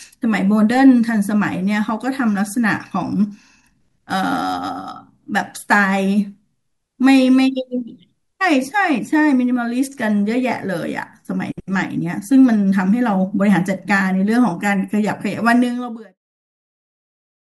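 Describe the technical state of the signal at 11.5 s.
At 11.5 s the speech signal is intact, with no fault present at that point.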